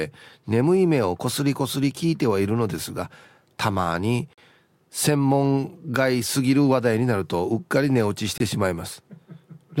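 Hard-edged holes of silence cut into the speech at 4.33 to 4.38 s, about 44 ms, and 8.38 to 8.40 s, 25 ms. These are gaps between stream segments: timestamps spaced like 4-second segments leave small holes that the player pads with silence, without losing audio.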